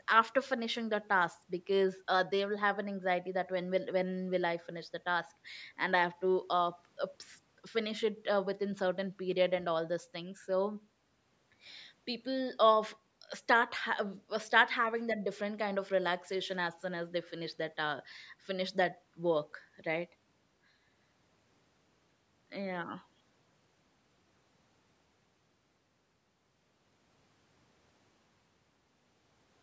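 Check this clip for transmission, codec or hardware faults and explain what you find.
Nothing stood out on listening to this speech; what can be heard of the call microphone processing, with the top end stopping around 8 kHz, is ordinary for a call.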